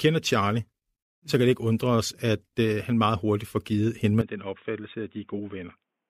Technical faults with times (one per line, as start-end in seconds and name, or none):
4.21-6.09 input switched to a poorer device